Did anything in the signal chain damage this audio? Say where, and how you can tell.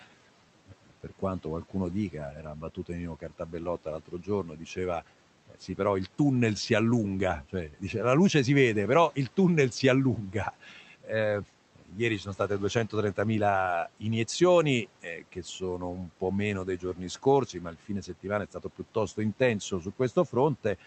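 Yes: the call noise suppressor mistook speech for noise, cutting it by up to about 13 dB at 0.71–5.78 s (before "il tunnel si allunga"), 10.16–11.09 s, 11.76–13.18 s, 15.02–16.22 s (before "meno dei") and 16.78–19.18 s (after "meno dei"), so sounds come out swallowed.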